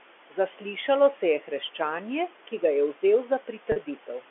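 Noise suppressor artifacts run throughout. The suppressor pulls the steady room noise down by about 12 dB between words and lets it rise under them.

Packet loss with pitch repetition occurs from 3.72 to 3.76 s. About 40 ms went missing, which fits two lost packets, and the receiver filled the gap by repeating the last pitch period, giving a brief held, buzzy tone.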